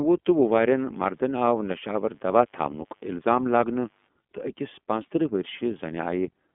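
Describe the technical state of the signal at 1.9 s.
At 1.9 s the speech sits inside a mains buzz that runs from 0.30 to 4.10 s. Switching spikes twice per 50 Hz cycle produce a dense ladder of harmonics. It sounds like a steady, raspy buzz, faint and far below the speech.

The iLBC codec is also present here, as it is throughout. Each 30 ms frame is coded on its own, and nothing passes above about 3.7 kHz. The speech sounds narrowband, slightly rough and synthetic, which fits the 13.33 kbps mode.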